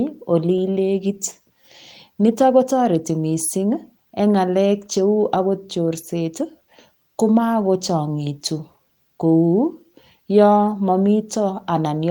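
No technical faults can be heard anywhere here.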